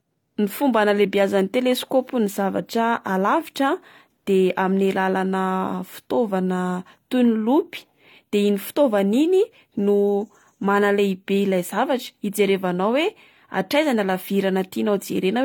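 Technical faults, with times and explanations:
Throughout: transcoding between lossy codecs. The speech carries two different sets of coding artefacts layered together, with nothing above 18.4 kHz. The likely cause is an HE-AAC encode near 40 kbit/s re-encoded as AAC-LC near 48 kbit/s, the second codec wasting bits on the first codec's damage.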